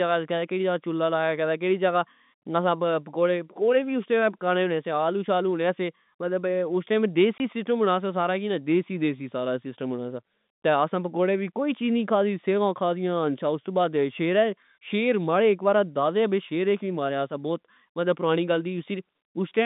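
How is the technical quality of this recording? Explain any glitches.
One glitch stands out in this telephone-band speech, which carries the narrow 150 Hz to 3.7 kHz line sound of G.711 coding. Packet loss filled with silence, 7.38 to 7.40 s: a 20 ms chunk of audio was lost and the receiver substituted silence, leaving a hard-edged hole.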